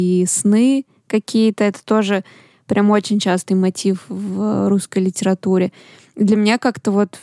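No technical faults can be heard anywhere in the speech signal, which stays steady throughout.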